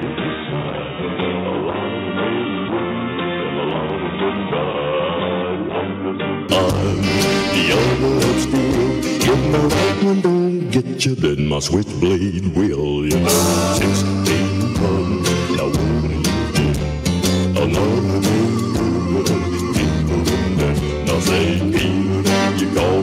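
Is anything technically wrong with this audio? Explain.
Yes. From the start to 6.49 s the sound is dull and boxy, with a level roughly 5 dB lower, and a faint new noise floor far below the signal. The likely cause is an input switched to a poorer device, one that passes a narrower band. The change back to full bandwidth at 6.49 s is abrupt, with no gap. On a spectrogram, energy stops at a lower ceiling until that point, and the waveform is visibly smaller before it.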